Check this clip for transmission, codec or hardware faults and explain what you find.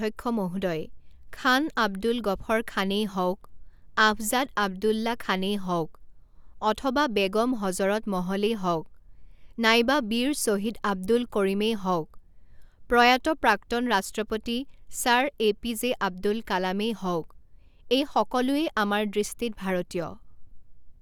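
No transmission, codec or hardware faults turn up in this speech clip.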